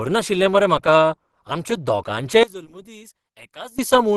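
Opus compression runs through the whole clip, and the speech has a muffled, hoarse quality with plainly audible codec damage that points to the codec working in its hybrid speech mode, which fits a low bitrate around 16 kbps. Energy is kept in each band but detail is filled in coarsely, so the sound turns rough rather than swirly. Nothing is present above 12.2 kHz, where the encoder has cut the bandwidth to save bits; this is likely the cause of the dulled top end.

One channel inverted from 2.43 to 3.79 s: the speech suddenly drops by about 20 dB, leaving only a faint copy. With one channel's polarity flipped, everything common to both channels cancels when they are combined, so the centred voice largely disappears. What remains is only the small difference between the channels, likely the result of a reversed-polarity channel meeting a mono sum.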